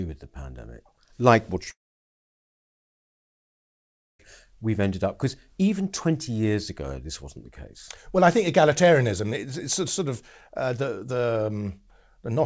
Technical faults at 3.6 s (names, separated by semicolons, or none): long network dropout